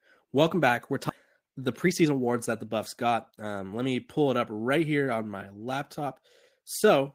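A skip ahead at 1.09 to 1.11 s drops roughly 0.7 s of speech, discarded in transit or by an overfull jitter buffer while later audio was queued. Playback jumps straight across the hole with no silence, so the two sides join almost directly.

A jitter buffer speed-up follows from 1.39 to 3.94 s. Holding too much audio, the receiver removed short pitch-period pieces repeatedly, trimming about 0.3 s. Speech plays at 110% speed with unchanged pitch and sounds noticeably hurried.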